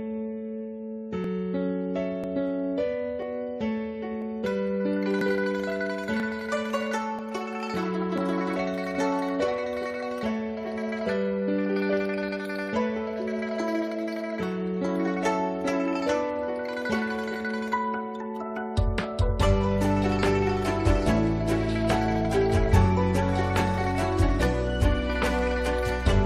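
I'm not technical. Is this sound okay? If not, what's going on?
No. There are tiny skips at 1.24, 2.24, 3.22, 4.22, 5.21, 6.2, 7.19 and 8.18 s: overlap between stream segments, where one-second chunks overlap and the player trims a sliver of real sound each time.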